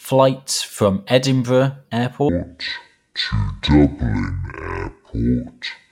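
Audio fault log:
2.29 to 5.91 s, section at the wrong speed: from 2.29 s to the end of the clip the speech suddenly drops deep and drags, running at about 0.55 times its proper rate, so it sounds heavy and slurred, with the pitch sunk by roughly ten semitones, close to an octave. Speed and pitch shift together at one instant, which points to this stretch being played back against the wrong clock, likely a sample-rate mismatch in an editor or player.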